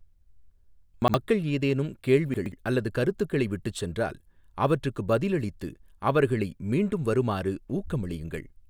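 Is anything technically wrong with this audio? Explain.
Yes. The speech has chunks out of order at 1.02–1.14 s and 2.34–2.52 s, just before "அல்லது கருத்துக்களை விட்டுச் சென்றால்". A 60 ms chunk plays one, then two, chunks late, so the sound jumbles. The waveform and spectrogram show six hard vertical joins, three at each spot, where frames don't line up.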